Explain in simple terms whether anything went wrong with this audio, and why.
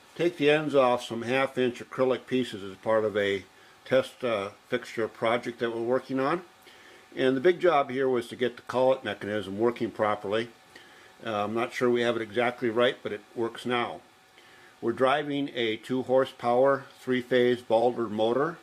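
Nothing went wrong here.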